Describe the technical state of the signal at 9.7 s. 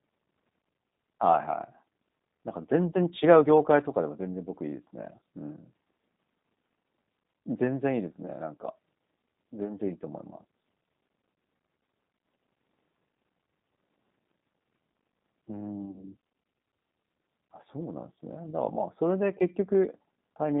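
At 9.7 s the speech is inside a short gap filled by VoIP packet loss concealed by the speech codec, from 9.65 to 9.70 s. About 10 ms of audio is missing, which points to a single lost frame. The decoder carries the last pitch and vocal-tract filter forward at falling gain, giving a brief smear that fades. Recovery lags because each frame builds on the previous one. On a spectrogram, the harmonic stripes freeze into flat lines and dim. The waveform shows a short run of repeated cycles with shrinking amplitude.

Underneath, G.729 coding at 8 kbit/s is plainly audible, making the speech rough and synthetic. Its telephone band runs from 150 Hz to 3.7 kHz, so the spectrogram is empty above about 3.7 kHz and thin below 150 Hz.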